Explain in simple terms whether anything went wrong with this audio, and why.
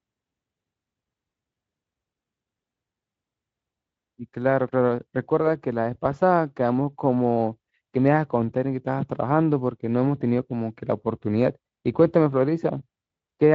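Nothing went wrong with this audio, and the speech comes through as it should.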